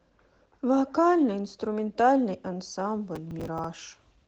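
Throughout the clip, the speech passes through Opus voice compression at 16 kbps in hybrid mode, with SILK linear prediction below 8 kHz, a thin CELT layer above it, and 20 ms frames. The coarsely coded excitation leaves the speech plainly hoarse, slightly robotic and smeared.

From 3.16 to 3.65 s, processor overload crackle appears as the processor misses a run of deadlines, around ten of them, with buffers of about 5 ms. Each late buffer repeats old audio with hard edges, and together they produce a gritty tearing crackle over the speech.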